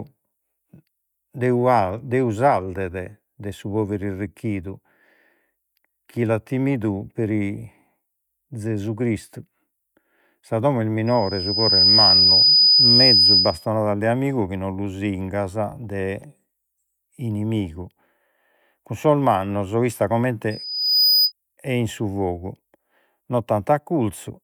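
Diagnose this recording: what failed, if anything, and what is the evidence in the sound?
Loudspeaker feedback squeal, an acoustic loop on the analogue side between microphone and loudspeaker. A pure tone at 5 kHz rises after "domo est" at 11.06 s. It swells over under a second to about 10 dB above the speech. It holds until 13.67 s, before "de amigu chi non". It returns from 20.50 to 21.32 s, building faster and peaking near 5 dB above the speech. The microphone hears its own loudspeaker. At 5 kHz the loop gain exceeds one, so that tone feeds itself.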